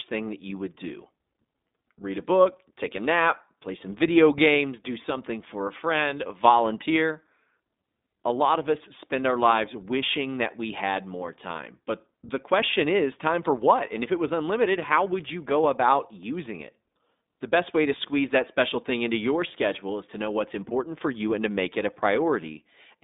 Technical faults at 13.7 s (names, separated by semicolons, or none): iLBC codec